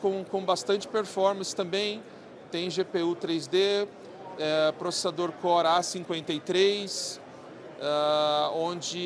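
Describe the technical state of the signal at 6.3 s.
At 6.3 s the signal is intact, with no dropout, distortion, glitch or other fault audible at that point.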